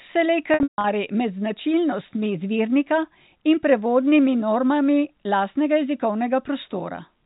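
From 0.54 to 0.84 s there's packet loss with pitch repetition. About 240 ms drops out in bursts, the longest 150 ms. Each gap gets a buzzy repeated cycle that fades before "med značilnostmi izvirnika in".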